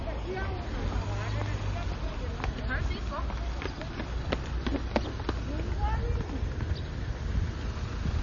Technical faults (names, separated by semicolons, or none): MP3 compression